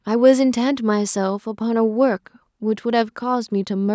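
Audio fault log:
Nothing stood out on listening to the speech, which carries the ordinary character of call microphone processing, with the lowest bass trimmed and nothing above 8 kHz.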